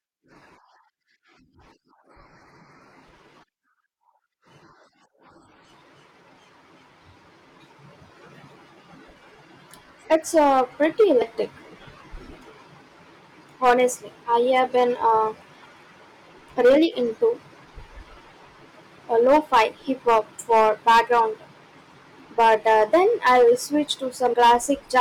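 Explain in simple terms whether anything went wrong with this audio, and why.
Yes, two things went wrong. Hard clipping runs through the whole speech clip: the loudest peaks were too big for the recording chain and got sliced flat, so they crackle. That crackle follows loudness, unlike background noise. Compressed frames were skipped at 11.22 s, just after "uh pretty", and again at 24.34 s. The audio jumps ahead by about 0.07 s the first time and about 0.15 s the second.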